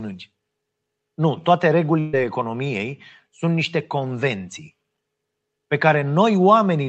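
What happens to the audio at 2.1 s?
A burst of packet loss runs from 1.99 to 2.15 s. About 140 ms of speech never arrived, and the receiver stretched the last sound across the gap, fading it rather than going silent, before resuming further on. That filled gap, not a hard mute, separates it from a dropout.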